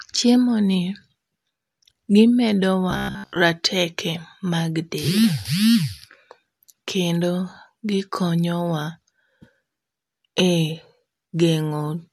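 From 2.91 to 3.37 s the speech turns robotic. This is robotic sound from repeated short buffers. A rigid, metallic buzz near 66.8 Hz loosely follows the words. Most of that stretch is repeats. Late audio is likely, with 15 ms chunks replayed.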